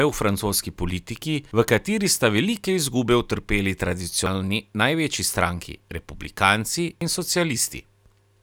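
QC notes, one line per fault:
4.26 s and 7.01 s, audio missing between chunks: the speech skips forward abruptly at each point, with roughly a third of a second simply gone and the sound on either side butted together without any gap, so the flow lurches and part of a syllable vanishes. The likely cause is a recorder or processor handling the audio in blocks of about 3 s and dropping material each time it hands over from one block to the next.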